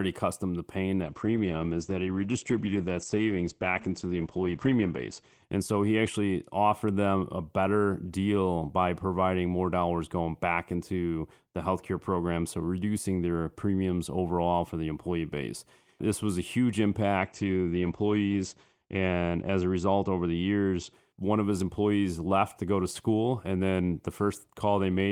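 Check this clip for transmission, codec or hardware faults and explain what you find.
Two call bitrate drops occur, at 1.02 to 6.75 s and 17.19 to 20.99 s. The bandwidth estimate fell, so the encoder coded with far fewer bits. Highs vanish above 8 kHz. Speech turns rough and muffled, which fits roughly 10 to 13 kbps.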